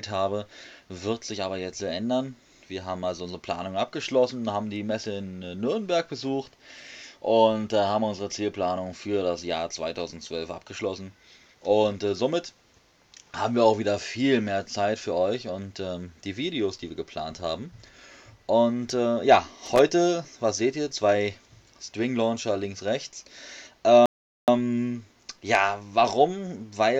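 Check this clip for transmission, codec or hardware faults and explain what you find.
Two faults turn up here, one hardware and one transmission, both in the last third of the clip.

From 19.66 to 19.79 s there's a short burst of loose connector crackle, lasting about 135 ms. It's an irregular scratchy rattle laid over the sound. What's happening is a worn or dirty contact flickering between touching and not touching as something moves, so the signal gets chopped into ragged fragments. Any DC sitting on the line jumps with each make and break, which adds pops.

Then at 24.06 s the audio drops to dead silence and picks up again at 24.48 s. That's a rebuffering stall: the player ran dry of downloaded audio and simply waited for more to arrive. You can tell because it resumes exactly where it left off, with nothing skipped or repeated. The only cost is about 0.42 s of extra time spliced into the timeline as a clean gap.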